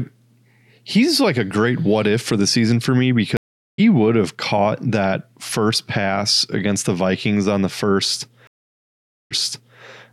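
Speech, broken twice by a stream reconnect: the connection dropped and the player restarted its decoder mid-stream. At 3.37 s, 413 ms of silence ends with speech resuming about 0.4 s further on; at 8.47 s, 834 ms of silence resumes 488 ms earlier, repeating audio.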